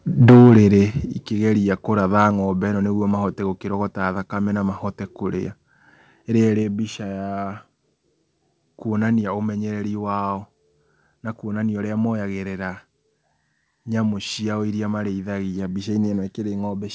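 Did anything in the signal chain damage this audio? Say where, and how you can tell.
Yes. Microphone overload from 0.21 to 0.67 s, at the converter: speech peaks exceed full scale by about 10 dB and are flattened, adding harsh crackle, likely from excessive input gain.

Microphone volume stepped down at 0.3 s and 1.29 s, by about 2 dB and then 6 dB: abrupt level drops, likely call-processing gain control reacting to the clipping.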